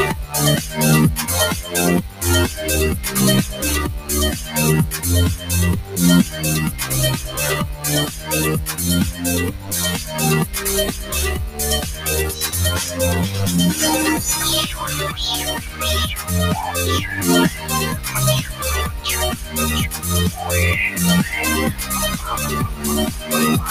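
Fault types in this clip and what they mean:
noise suppressor applied to music or sounds: a speech-tuned suppressor treats steady, held sound as noise, so the level swings by about 10 dB, pumping rather than riding evenly like a compressor.
sound cut by the noise suppressor: held and fading parts sink by up to about 9 dB, most between 3.53 and 12.98 s, while sharp onsets survive, unlike a dropout's full silence.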